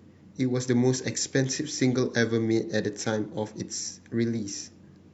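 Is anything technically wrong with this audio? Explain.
No, nothing is technically wrong with this audio.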